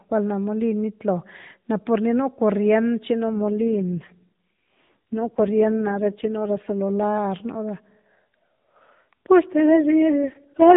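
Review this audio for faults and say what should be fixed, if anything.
An AMR rate drop occurs twice, from 3.29 to 6.82 s and from 9.46 s to the end at 10.76 s. The mobile link appears to have weakened, so the network pushed the narrowband AMR codec to a lower mode and spent the freed bits on error protection. The speech stays within the same band below 4 kHz with no gaps, but becomes rougher, buzzier and more synthetic, which fits a drop from 12.2 to 4.75 kbps, before clearing when the higher rate returns. Better radio coverage or a stronger, more stable connection on the sending side would keep the codec at its full rate.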